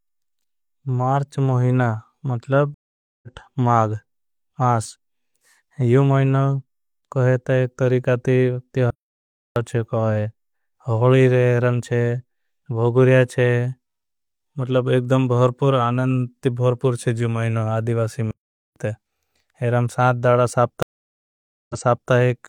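At 2.74 s, after "मार्च महीना मतलब", a stream reconnect breaks the speech: the connection dropped, about 0.48 s of silence follows, and a fresh decoder resumes roughly 0.4 s further on. On a waveform it appears as a flat gap, then speech picking up mid-flow.

Playback stalls follow at 8.91 s, after "कोहेता एक तरीकाते", lasting 0.66 s, and at 18.31 s, after "चे जो मुहिना आदिवासी", lasting 0.45 s. Speech halts abruptly, likely because the player ran short of data, then continues. A spectrogram shows clean blank columns.

At 20.83 s a second reconnect leaves 0.87 s of silence before the sound resumes 0.42 s earlier, so a stretch repeats. It appears as a blank gap followed by duplicated spectral patterns.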